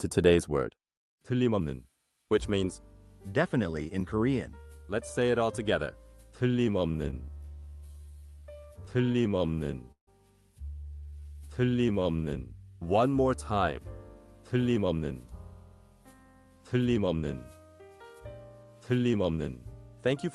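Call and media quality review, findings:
Repeated stalls (stutter), 6.97–9.50 s. Audio drags and catches 19 times, with 262 ms of concealment in total and no gap longer than 16 ms. Nothing audibly lost. Component: jitter buffer underrun from late or slow packet arrival, with the receiver extending the last sound each time. On the waveform, short smeared repeats of the preceding cycle. On the spectrogram, brief vertical seams where harmonics hold flat across each fill.

Jitter buffer slow-down, 8.97–9.68 s at 89% speed (84 ms added) and 11.06–12.25 s at 86% speed (178 ms added). Sound stretched and drawn out at unchanged pitch. Component: jitter buffer building reserve by repeating single pitch periods many times over. On the waveform, identical periods recur in runs. On the spectrogram, harmonic lines stay at the same frequency but elongate, with no downward shift.

Call audio freeze, 9.92–10.09 s. 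A 153 ms hold: the last sound is carried briefly, then about 110 ms of silence, after which audio resumes from the stopping point with nothing missing. Likely cause: packets held in transit, leaving the jitter buffer empty, and playout delay grows by the same 153 ms. On the waveform, a decaying tail into a flat section. On the spectrogram, fading content, then a blank vertical band.

Jitter buffer speed-up at 14.55–15.33 s (110% speed), 16.16–17.24 s (107%) and 18.91–20.25 s (108%). Each span sounds hurried at the same pitch, with around a tenth of a second cut out per span. Component: jitter buffer shedding excess delay after bunched arrivals by repeatedly dropping one or a few pitch periods. On the spectrogram, events compress in time while harmonic spacing is unchanged. On the waveform, small splice points where periods were removed.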